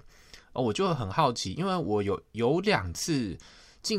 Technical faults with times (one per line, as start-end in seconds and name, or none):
none